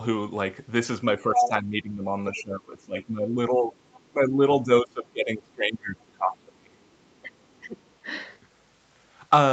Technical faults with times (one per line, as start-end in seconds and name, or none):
1.20-3.75 speech suppressed in double talk
1.35-1.48 other side's voice leaking through
4.08-6.78 speech suppressed in double talk
7.02-7.20 other side's voice leaking through
7.22-7.80 speech suppressed in double talk
7.86-7.94 other side's voice leaking through